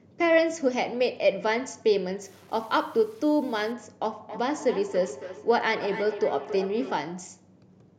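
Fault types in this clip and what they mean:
Low bit depth without dither, 2.22 to 3.72 s: the speech turns grainy and gritty here, with distortion that rises and falls with the sound itself rather than sitting as a steady hiss. Likely the signal was cut to about 8 bits by plain truncation with no dither, so the rounding error tracks the waveform, giving a noise floor only about 30 dB below the speech and making quiet stretches sputter or vanish.
Feedback echo between two devices, 4.18 to 7.0 s: each sound comes back roughly every 300 ms, thinner and more ringing with each return, peaking at about 12 dB below the speech. A second device in the same room is playing the call out loud, and the first device's microphone picks that playback up again. Its echo canceller removes only what its own speaker plays, so the loop keeps recirculating.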